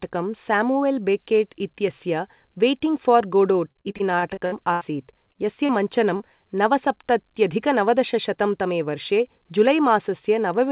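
From 3.53 to 5.72 s the speech breaks up with repeated packet loss, giving a robotic sound. Fourteen gaps fall within this span, the longest about 80 ms. Each one is bridged by extending the last stretch of audio before real audio resumes, so roughly 18% of the span is synthetic fill. The result is choppy phrasing with fragments missing, heard through a narrowband path with nothing above 4 kHz, which fits a G.711 A-law call at 64 kbps.

At 6.17 to 6.23 s there is a short concealed packet loss. About 30 ms of audio never arrived in time, and the receiver covered the hole by continuing the preceding sound and then blending back into the real signal. It is heard as a brief smear or wobble just before "नवसप्तत्यधिक नवदशशतं तमे वर्षे", and a short consonant-like sound at that point may be lost.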